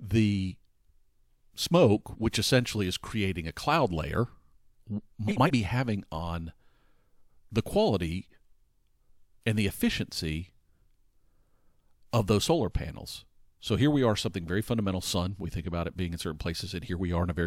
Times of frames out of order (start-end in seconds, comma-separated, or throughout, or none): 5.27-5.50